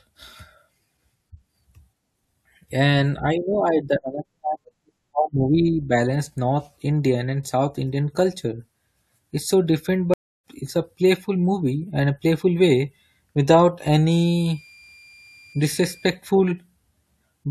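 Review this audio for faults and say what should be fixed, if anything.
Stream reconnect at 10.14 to 10.44 s: the connection dropped, leaving 0.3 s of silence, then a fresh decoder resumed the speech roughly a third of a second further on. Prevent it with a larger receive buffer and reconnect logic that resumes from the last delivered position.

Switching supply whistle from 14.11 to 16.11 s: a faint tone around 2.39 to 2.40 kHz, about 30 dB below the speech, wandering slightly as the supply's load shifts. Prevent it by filtering or replacing the noisy supply and keeping it away from the audio path.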